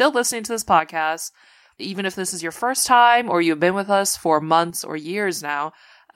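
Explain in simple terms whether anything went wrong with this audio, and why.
One channel drops out, twice: from 0.80 to 2.78 s, just after "listening to this" and until "time or you've been", and again from 4.70 s to the end, after "been with us for". Each time the speech suddenly gets noticeably quieter; the first time it then jumps back up, and the second time it stays quieter to the end. The likely cause is that one side of the stereo recording went silent, so when both sides are combined into one, only half the sound remains.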